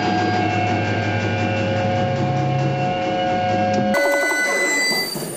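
From 3.94 s to the end, the audio suffers a wrong sample rate fault: the material jumps to 2.76 times its speed and about 17.6 semitones higher in pitch, which fits 16 kHz samples being played out at 44.1 kHz without conversion. What sets this apart from a pitch shifter or a time-stretch is that tempo and pitch move together by the same ratio, so the sound is both sped up and raised rather than one or the other.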